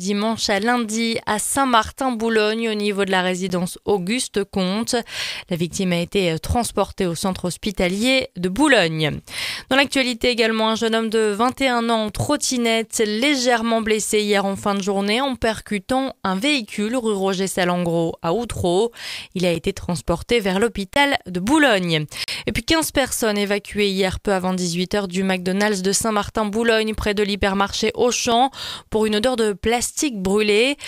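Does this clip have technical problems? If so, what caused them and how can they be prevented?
Yes. There are blocks of digital silence at 3.49 s, 12.09 s, 19.55 s, 20.94 to 20.96 s, 22.24 to 22.28 s and 28.32 s. Each is a run of silence lasting from about 2 ms up to 40 ms. The audio drops straight to nothing and returns with no fade. This leaves an abrupt edge at both ends. The shortest gaps sound like ticks, and the 20 ms and 40 ms ones are audible holes. Blocks of zeros like this point to the output buffer not being filled before playback needed it. Prevention: give the audio processing enough headroom, with a larger buffer or a lighter, higher-priority processing thread, so every buffer is filled on time.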